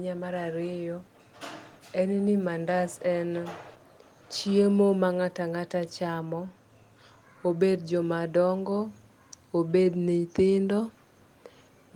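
Listening to the speech recording, nothing stood out as a technical fault.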